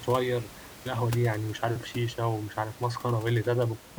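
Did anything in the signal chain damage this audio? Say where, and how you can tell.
No, nothing in the chain has damaged this speech; the only thing under it is the room's own background noise, sitting about 18 dB below the voice, which belongs to the recording rather than to any stage of the system.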